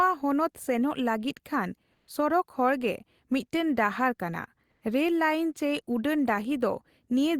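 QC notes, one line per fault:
1.93–2.05 s, comfort noise in place of the background: For about 120 ms the real background gives way to a steady, featureless hiss at the same level, about 48 dB below the loudest sound. The likely cause is Opus discontinuous transmission, with the receiver filling the pause with synthetic noise.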